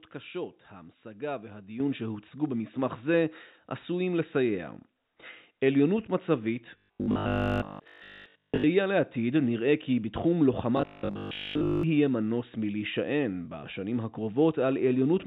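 At 1.8 s the call software raised the microphone volume in one step, so speech and background jump up together by about 7 dB. From 6.78 to 8.66 s and again from 10.77 to 11.83 s, robotic sound from repeated short buffers appears, likely because audio arrived too seldom and 20 ms buffers were repeated. This produces a rigid, metallic 50 Hz buzz over most of the first stretch and nearly all of the second, within the G.711 A-law call path's band, which stops at 4 kHz.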